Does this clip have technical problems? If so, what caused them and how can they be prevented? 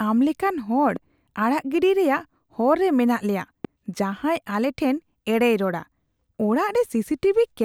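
Yes. Loud pops hit at 0.96–0.99 s and 3.65–3.67 s, about 5 dB above the speech. Each is likely a voltage spike from a switch, plug or static. Secure connections and ground equipment properly.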